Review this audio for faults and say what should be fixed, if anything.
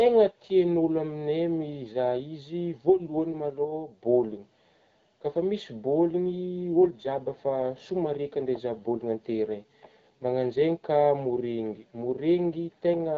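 Nothing here needs fixing, as no faults can be heard. The speech carries the slightly band-limited character of the AMR wideband (HD Voice) codec at 12.65 kbit/s, with the top of the band above 6.4 kHz filled by shaped noise and only light coding texture on the speech.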